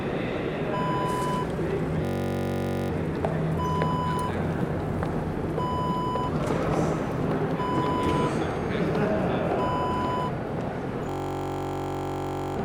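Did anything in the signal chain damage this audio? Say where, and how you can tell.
Yes, a system hang loop at the driver or buffer stage, from 2.05 to 2.90 s and 11.09 to 12.57 s. A 21.33 ms slice, which fits a 1024-sample buffer, repeats as a 46.9 Hz buzz. The waveform shows identical repeating blocks, and the spectrogram shows evenly spaced harmonic lines.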